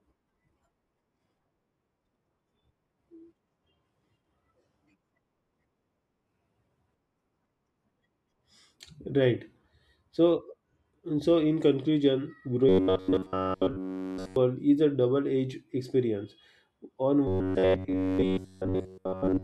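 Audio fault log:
12.69–14.36 s and 17.27–19.44 s, robotic sound from repeated short buffers: audio likely arrived too seldom, so one short slice loops, forcing a rigid, metallic 93.8 Hz buzz.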